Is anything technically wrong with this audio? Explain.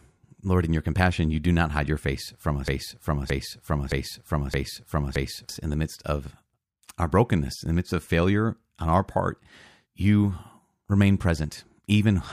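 Yes. From 2.68 to 5.49 s, just after "hide your face from", the speech catches on a fragment of about 0.62 s and plays it exactly, back to back, five times before resuming at "in the midst of". This is a broken-record loop. The player, encoder or stream likely stalled and kept resending the last piece it held. The audio that belonged in those seconds is lost, not delayed.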